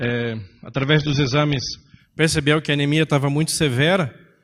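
Speech that opens on a low-bitrate rendition of an adaptive stream: for the first 2.0 s there's nothing above 6.3 kHz and codec artefacts are heavier, consistent with roughly 24 kbit/s AAC. Right around "percebeu que a anemia" the quality jumps cleanly, no gap, to what sounds like about 96 kbit/s.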